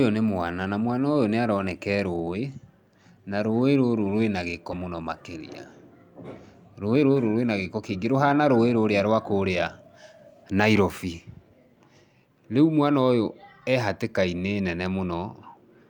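At about 4.71 s the speech takes a skip ahead. Something like 0.4 s of audio simply never plays. It was dropped, either in transit or when the jitter buffer overflowed with later audio already queued, so playback leaps forward and the two sides butt together almost seamlessly. The join settles by 4.82 s, and the talk picks up at "mũno makĩrĩa" with that chunk gone and the timing pulled in by roughly the same amount.

From 6.81 s to 8.13 s there's a jitter buffer speed-up. The buffer was sitting on more audio than it wanted, so the receiver trimmed out tiny slices a pitch period or so long, over and over, to drain the backlog. Altogether something like a tenth of a second disappears, and the speech runs at about 108% speed. The pitch stays put, but the delivery sounds a bit rushed through that stretch.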